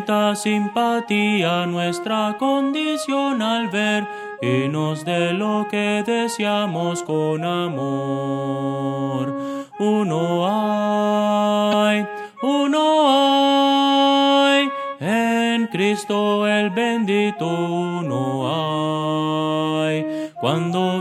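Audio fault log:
11.69–11.74 s, damaged data in a compressed stream: there's a quick glitch here, about 40 ms long, where the decoder hit a stretch of corrupted bytes it couldn't make sense of. It chews on the bad frames, loses its place, then hunts for the next valid frame header and picks up from there. That scramble is what you hear as the glitch.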